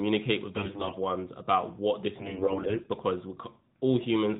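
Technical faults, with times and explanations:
0.56–0.94 s, AMR bit errors, just before "ones about what this": the sound keeps its pitch and level but turns hoarse and scratchy. Some of the less protected bits in roughly 18 frames of the 12.2 kbps AMR-NB stream arrive flipped while the checksum still passes, so excitation pulses land in the wrong places and the fine gain and spectrum values drift.
2.18–2.89 s, AMR bit errors, right after "ones about what this": a longer, rougher burst with a gargly quality, since about one bit in seven is corrupted across some 35 frames.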